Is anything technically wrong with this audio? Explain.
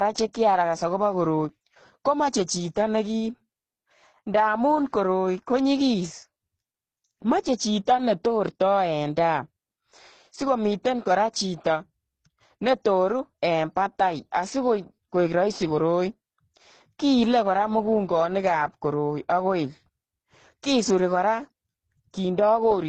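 Yes. Throughout, the speech shows transcoding between lossy codecs, likely a low-rate Opus encode re-encoded as HE-AAC. Smeared, warbly artefacts stack, and a spectrogram shows nothing above 9.7 kHz.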